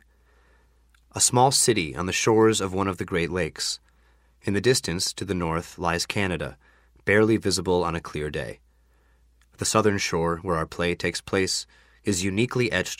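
Nothing is technically wrong with the audio in this clip.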